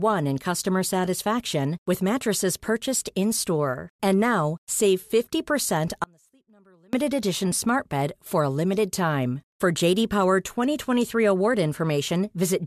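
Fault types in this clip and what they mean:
audio dropout to a faint residue: The speech cuts out abruptly at 6.04 s and returns at 6.93 s. The gap holds only a faint trace of the sound, roughly 35 dB down. The likely cause is a brief signal loss while the path stayed live.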